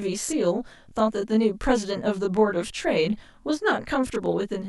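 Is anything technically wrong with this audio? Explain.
Yes. Throughout the speech there is channel delay (comb filtering). One channel arrives roughly 20 ms behind the other, and when the two are summed to mono the shared content cancels at evenly spaced frequencies. The first notch sits very low, around 20 Hz, with closely packed notches above it. The result is a rough, slightly doubled sound. The notches stay fixed, which separates it from flanging, and the delay is too short to be heard as a distinct echo.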